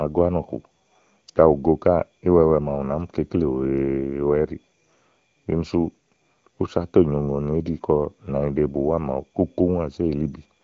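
No technical faults can be heard anywhere in this recording.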